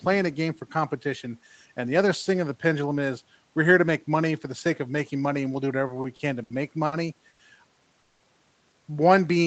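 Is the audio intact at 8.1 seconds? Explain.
No, a call audio freeze runs from 7.99 to 8.23 s. Packets were likely delayed and the jitter buffer emptied, so the receiver stretched the last sound into a fading buzz or hiss for about 210 ms. The audio then resumes where it stopped, with nothing lost.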